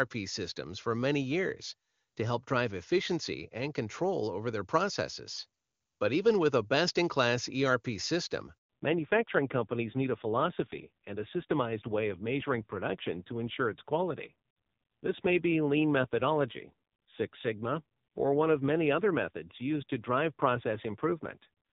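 Speech carried over a phone call opens in clean HD Voice, with faint or no coding damage from the AMR-WB codec, sound that fits its top 23.85 kbit/s mode. A handover gap runs from 8.58 to 8.70 s: no frames arrive for 120 ms while the call switches networks, so the waveform collapses to a flat line and the spectrogram shows a blank vertical stripe. From 8.70 s to the end, a fallback to narrowband takes hold as the call lands on narrowband AMR. The spectrogram shows a hard ceiling at 4 kHz with nothing above it, and the speech turns dull and rough, which fits a low-rate mode around 5.9 kbit/s.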